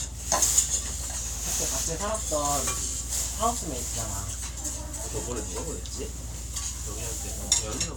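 A recording of everyday sounds with a drift correction step from 1.17 to 2.0 s: playback slows by 5.87% and drops about a semitone (105 cents), then snaps back, likely from clock-matching software adjusting its buffer. Unlike wow or flutter, the shift is one abrupt, steady step rather than a wavering.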